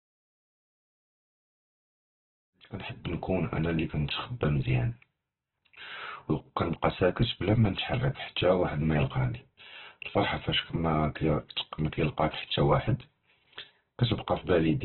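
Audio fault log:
throughout: Opus compression. The speech comes across grainy and rough, with nothing above about 4.2 kHz, so it's narrowband and muffled. That's likely Opus in its CELT mode starved of bits, which fits a rate around 8 kbps, filling bands with noise rather than detail.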